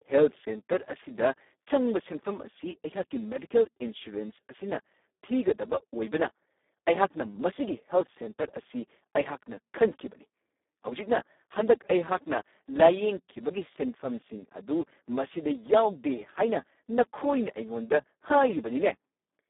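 Speex codec damage runs throughout: at what sounds like about 4 kbps, the CELP excitation starves, leaving speech hoarse and noisy, band-limited near 250 Hz to 3.6 kHz.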